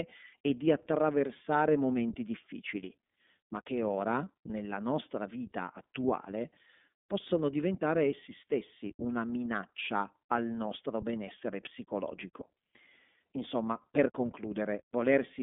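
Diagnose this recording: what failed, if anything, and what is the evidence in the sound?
Throughout the clip the speech sounds narrow, thin and slightly rough, with a buzzy, synthetic edge and nothing audible above about 3.6 kHz or below about 200 Hz. This is iLBC codec damage at the codec stage. The codec models the excitation of each frame on its own, consistent with 30 ms frames and a rate that fits 13.33 kbps, and discards the upper band. Independently coded frames leave the grainy texture, and the narrowband line removes the brightness.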